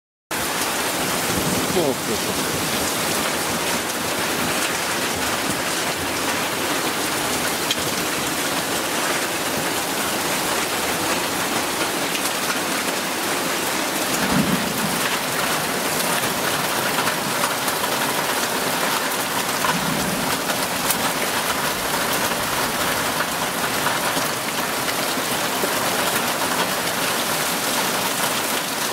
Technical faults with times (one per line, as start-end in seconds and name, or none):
0.00-0.31 cut-off start